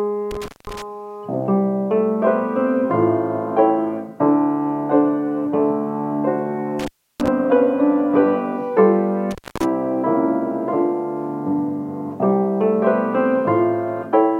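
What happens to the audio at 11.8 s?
Nothing goes wrong at 11.8 s; the audio plays through that moment intact, with no dropout, click or distortion.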